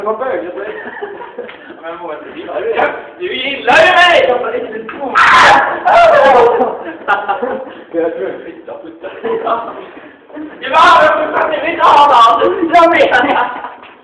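No technical faults are audible.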